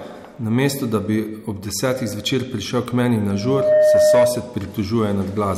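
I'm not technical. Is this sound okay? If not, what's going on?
No. From 3.28 to 4.53 seconds there is loudspeaker feedback squeal. A microphone is picking up the loudspeaker it feeds, so the sound loops round and round. At one pitch, about 612 Hz, the loop keeps making itself louder. You hear a steady tone rise over about half a second into a squeal. It ends up well above the speech. Then it stops, as though the loop was broken.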